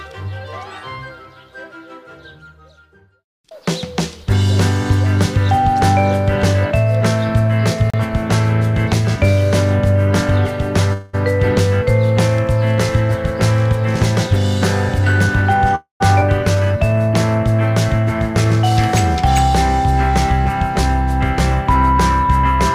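At 7.90 to 7.94 s there's a block of digital silence: about 35 ms where the sound cuts straight out and back, so you get a little hole.

Then at 10.93 to 11.15 s comes a call audio freeze. The last bit of sound is stretched into a fading buzz for about 0.2 s, then things carry on where they left off. Nothing's lost, but playback is now that much later. The likely cause is held-up packets draining the jitter buffer.

From 14.99 to 15.71 s a jitter buffer speed-up kicks in. Pitch-period slices totalling around 70 ms get trimmed, so it runs at 110% and sounds hurried at the same pitch.

Right after, at 15.75 to 16.02 s, there's another freeze. It's about 0.25 s of filler, fading to silence for the last 0.12 s or so.

At 16.20 to 16.23 s the audio does a skip ahead. Roughly 0.2 s goes missing, the two sides are butted together almost directly, and the delay drops by about 150 ms.

A jitter buffer slow-down follows at 16.55 to 16.99 s. 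Repeated pitch periods add 77 ms, dragging playback to 84% speed, drawn out but with unchanged pitch.

Finally, 18.10 to 18.70 s is a second speed-up, at 108% with around 50 ms cut.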